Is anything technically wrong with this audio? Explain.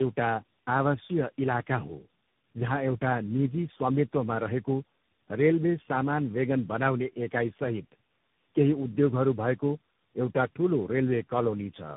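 Yes. Throughout, the speech sounds rough, muffled and warbly, with nothing above 3.8 kHz. This is tandem speech coding. The sound points to about four speech codecs in a row, ending in CVSD, each re-encoding the last one's already degraded output, so the losses compound.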